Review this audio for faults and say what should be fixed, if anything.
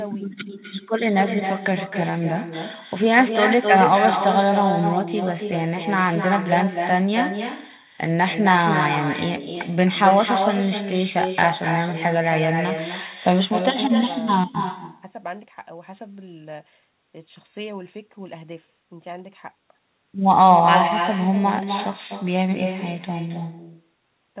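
Every phrase is trailed by a quieter, thinner copy, about 6 dB down and arriving roughly a third of a second later, throughout the clip. This is echo with no canceller: the far end's loudspeaker feeds its microphone and the sound returns across the network. Enabling acoustic echo cancellation at the far end, or using a headset there, would remove it.

Small, unevenly spaced timing hiccups recur across the whole clip, heard through the narrow telephone band that stops at 4 kHz. The cause is clock drift between sender and receiver: the sender's clock runs roughly 2% slow, so the receiver's jitter buffer keeps draining. Adaptive resampling at the receiver would prevent it.

From 0.03 s to 24.06 s the pace feels slightly slow and unsteady, playing at 98% speed and stretching the audio by around half a second overall. These are repeated timing corrections, with the receiver repeating short pieces in one direction to keep pace with the slow sender. 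Correcting the drift with smooth resampling instead of discrete edits would prevent them.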